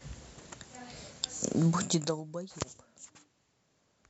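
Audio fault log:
1.77 to 2.23 s, zipper noise: the level falls around 20 dB in steps of about 2 dB, some twenty a second. Each unsmoothed step clicks, giving a ticking zip.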